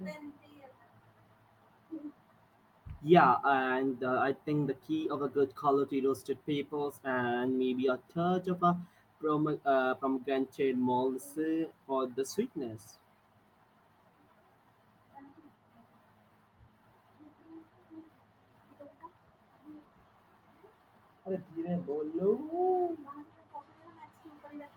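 Nothing in this speech recording stands out as a technical fault, so there's nothing to walk through here.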